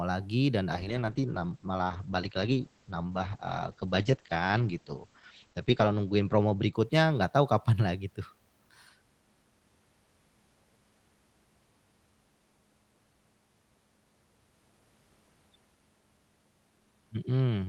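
Speech carried over an Opus call path suffers a call bitrate drop from 0.72 s to 7.67 s. The encoder is starved of bits, which fits a fall from about 32 kbps to 9 kbps. The speech turns rough and muffled as the upper band shrinks from 12 kHz to 8 kHz, with the worst stretch lasting about 5.1 s. Packet loss would leave gaps or choppy bursts. Here the degradation is continuous, and quality comes back once the bitrate recovers.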